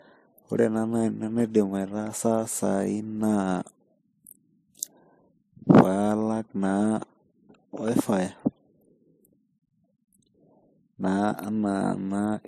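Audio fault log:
throughout, transcoding between lossy codecs: the speech carries coarse, smeared low-bitrate artefacts under a second, cleaner coding layer, with nothing above 15.1 kHz. The likely cause is a low-rate MP3, around 36 kbit/s, re-encoded as WMA near 96 kbit/s, which preserves the earlier damage.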